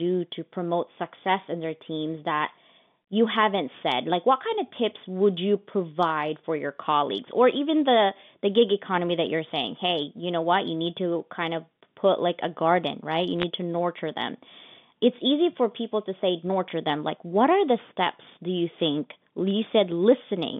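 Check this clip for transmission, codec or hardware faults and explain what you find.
There are two short bursts of bit errors on a digital phone line, carried over what sounds like a G.711 telephone path limited to roughly 150 Hz to 3.6 kHz. The first runs from 13.40 to 13.43 s, just before "to nurture them". The second runs from 19.46 to 19.54 s, right after "steps do you think". Each flipped bit corrupts a single sample. Hits on sign or high-order bits make the waveform jump, so you hear a quick cluster of sharp ticks crackling on top of the speech.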